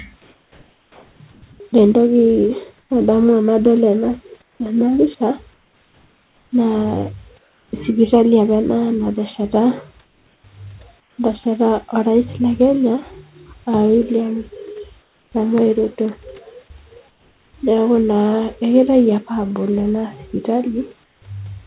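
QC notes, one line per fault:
0.22–7.72 s, 10.04–11.18 s, 21.04–21.22 s: comfort noise in place of the background. Pauses lose their real room texture for about 2.8 s, 0.58 s and 0.18 s, likely because discontinuous transmission substituted steady synthetic noise. In the last stretch it sits about 5 dB quieter.
4.55 s: onset clipped by the voice detector. The speech enters abruptly without its soft start. About 50 ms was likely never sent because the detector reacted late, so comfort noise filled the gap.
15.02–17.54 s: sound chopped by the voice detector. The speech turns choppy as the detector likely toggled transmission, replacing about 760 ms in total.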